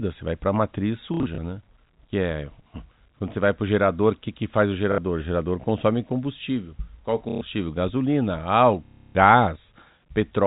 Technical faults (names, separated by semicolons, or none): packet loss with last packet repeated